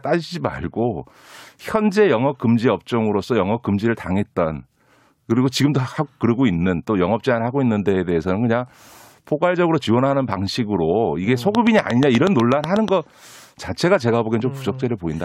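From 11.55 to 12.89 s, a train of clicks ticks through the speech, about ten evenly spaced pulses at 8.2 per second, standing well above the signal. Likely interference or a faulty connection or power supply.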